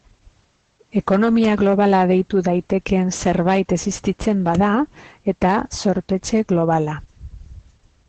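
Across the whole speech clip, Opus voice compression in its SILK linear-prediction mode is plainly audible. Nothing is left above 8.7 kHz, so the voice sounds muffled, and the coarsely coded excitation adds a hoarse, slightly robotic grain, which fits a wideband setting at about 12 kbps. A plain low-pass filter would also dull the top end, but it would not add this rough, synthetic texture to the voice itself.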